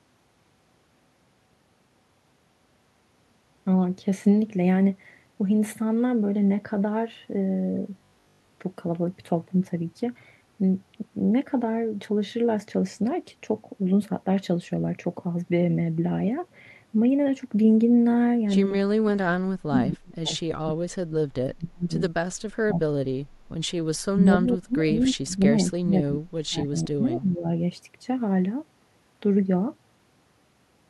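Speech runs through the whole clip. From 7.98 to 8.48 s it turns into a rigid, metallic 50 Hz buzz, robotic sound from repeated short buffers, likely from audio arriving too seldom so that about 20 ms chunks were replayed for most of that half-second. Unlike a plain dropout, the sound never goes silent and still loosely follows the speech. Later the voice is pushed down, by as much as roughly 30 to 40 dB, at 18.86–20.33, 20.5–21.94, 22.67–23.4, 24.11–25.58 and 25.76–27.47 s. This is speech suppressed in double talk, likely an echo canceller turning the talker down while the far side spoke.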